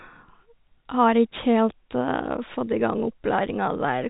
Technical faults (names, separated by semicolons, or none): none